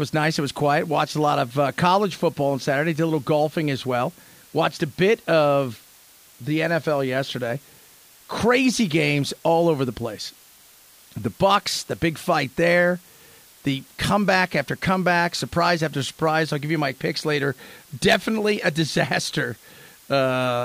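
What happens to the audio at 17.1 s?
At 17.1 s you're hearing low bit depth with dither, as across the whole clip: 8-bit rounding with added dither turns the error into a steady, even hiss roughly 30 dB below the speech.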